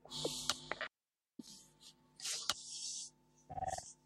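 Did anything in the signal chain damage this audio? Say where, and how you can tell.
Yes. There is an audio dropout to a faint residue from 0.88 to 1.39 s, about half a second during which the sound cuts out abruptly and only hiss remains, roughly 55 dB below the signal level. Because the noise floor stays live through the gap, the later stages kept running and only the source feed was lost. The likely cause is an intermittent break in the analogue wiring or input connection ahead of the converter.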